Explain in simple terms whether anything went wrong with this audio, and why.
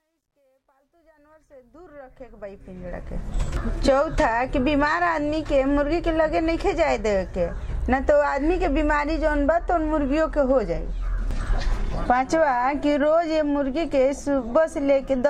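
The opening of the clip has truncation distortion on a fade. It runs from 0.0 to 3.4 s. A volume change was done digitally with too little detail and no added noise to smooth it. When the level gets very low, the wave turns into a few coarse steps. That makes the quiet part sound gritty. It is worst from 0.0 to 1.6 s. The roughness fits a 12-bit volume stage.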